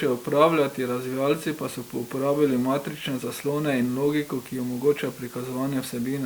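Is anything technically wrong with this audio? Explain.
Yes. Throughout the speech the signal has been reduced to low bit depth with dither, consistent with about 7 bits. Dither added before rounding turns the coarse quantisation error into steady white noise, an even hiss roughly 20 dB below the speech, with no distortion.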